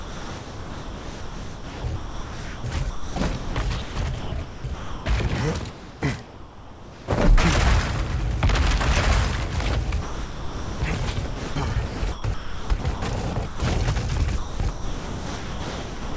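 From 0 to 2.64 s, 2.9 to 3.56 s, 3.82 to 5.06 s and 5.7 to 7.08 s, the sound is chopped by the voice detector, likely because the sender's detector kept toggling transmission and comfort noise filled the gaps. It flickers between real detail and smooth hiss. On a spectrogram, harmonic bands break off into flat, featureless noise blocks. The waveform alternates textured stretches with even, low-level fuzz.

From 10.02 to 10.82 s, sound is dropped by the voice detector, likely because it took quiet material for background and stopped sending. For 800 ms a steady noise floor replaces the signal before sound resumes. The spectrogram shows a uniform grey patch. The waveform flattens to a constant band.

From 11.26 to 13.02 s, 13.34 to 13.6 s and 14.38 s to the end, the same voice-detector chopping returns, with repeated switches into comfort noise. These appear as the same alternating detailed and featureless segments, with the waveform's envelope abruptly levelling off.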